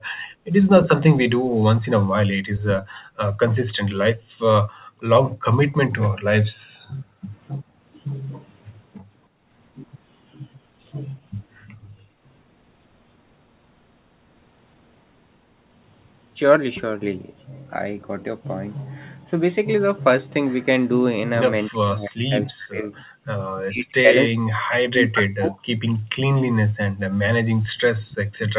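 Across the first 6.6 s the room sound keeps ducking, about 2 seconds in total and up to about 40 dB deep. That's background gated by the echo canceller, which clamps the mic while the far end plays. Between 6.88 and 7.64 s the speech itself dips briefly, by around 15 dB. The background gating comes back at 9.29–9.46 s (about 34 dB) and 11.66–12.23 s (about 25 dB). From 21.7 s to the end the speech keeps sinking in pieces, roughly 4 seconds' worth and up to about 40 dB down. Like the earlier dip, this is likely speech suppressed in double talk, with the canceller mistaking the talker for echo. One more short background gate hits at 27.56–27.78 s (about 40 dB). Throughout, nothing is audible above 4 kHz, which fits a G.711 mu-law call path at 64 kbps.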